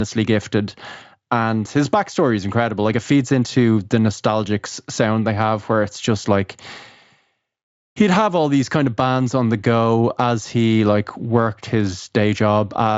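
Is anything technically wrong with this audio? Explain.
No, no technical faults here.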